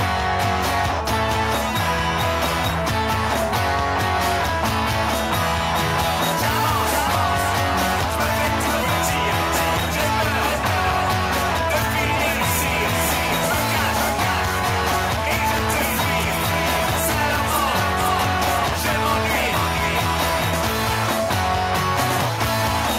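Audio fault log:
There is no fault in this audio.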